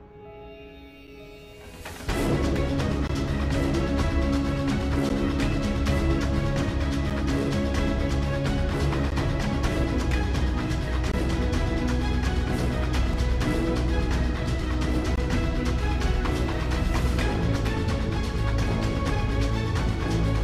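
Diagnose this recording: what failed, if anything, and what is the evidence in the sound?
The failure is at the streaming or playback stage: a gap between stream segments. Short silent holes with hard edges cut the sound at 1.07, 3.07, 5.09, 7.10, 9.10, 11.12, 13.13 and 15.16 s. Each lasts 4 to 21 ms. The two-second spacing fits 2-second segments whose timestamps leave a gap that the player fills with silence. No audio is lost.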